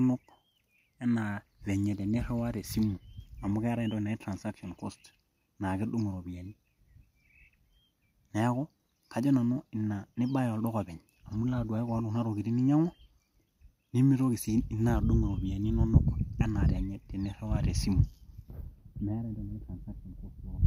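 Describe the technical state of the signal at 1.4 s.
At 1.4 s the speech signal is intact, with no audible technical fault at that point.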